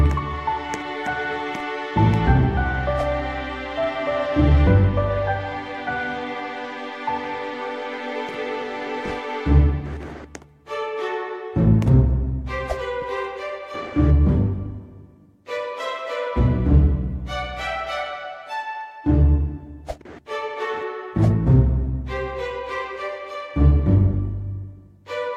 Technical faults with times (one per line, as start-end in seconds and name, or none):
none